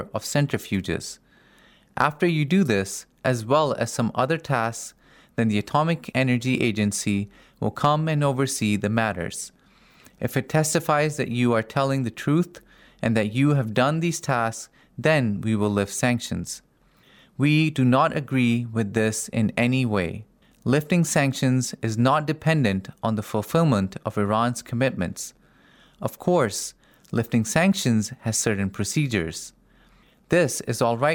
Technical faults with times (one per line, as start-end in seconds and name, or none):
2.00-2.04 hard clipping
7.84-7.87 hard clipping